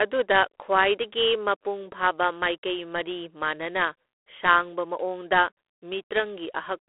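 Speech, and the whole clip carries plainly audible G.726 ADPCM damage: a harsh, rasping hiss riding on the voice and rising and falling with its level. That grit fits the 24 kbit/s mode, where too few bits per sample leave coarse prediction error. The sound sits in a 300 Hz to 3.4 kHz telephone band, with nothing above 3.8 kHz.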